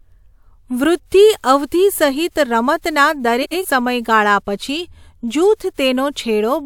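Between 3.42 and 3.65 s the speech breaks into a short garbled flutter. The cause is frames out of order: two adjacent blocks of about 93 ms each were decoded in swapped order, so the stretch plays with its halves exchanged and no time is lost.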